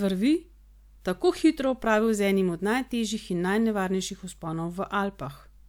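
No technical faults can be heard anywhere in the recording. There is nothing in its timeline to point to.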